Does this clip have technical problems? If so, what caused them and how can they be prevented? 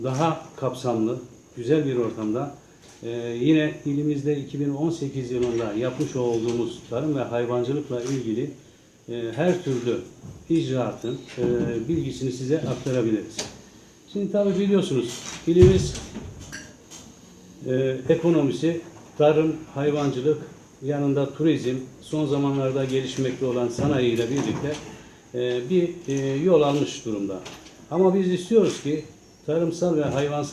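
No, there are no technical problems in this clip. Nothing here calls for a cause to be traced or a fix to be applied.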